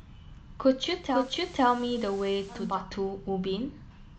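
At 0.96 s the receiver blends from digital radio to analogue FM over about 365 ms, returning at 2.85 s. Hiss rises to roughly 25 dB below the speech, a broadband noise floor on a spectrogram, and the waveform drops by about 1 dB.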